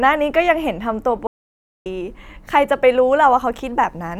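An audio dropout to silence runs from 1.27 to 1.86 s in this speech clip: the speech cuts off mid-flow and about 0.59 s of silence follows, with no room tone, before speech resumes. The likely cause is a brief loss of input while recording continued, writing silence.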